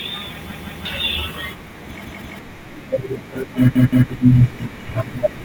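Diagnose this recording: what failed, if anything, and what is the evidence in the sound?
Repeated buffer at 0.51–0.85 s, 2.05–2.39 s and 3.76–4.10 s, a failure at the driver or buffer stage. Each time, a 171 ms piece of speech plays twice more with hard joins, a stutter that fits an 8192-sample buffer. New audio arrived late, and roughly 300 ms went missing.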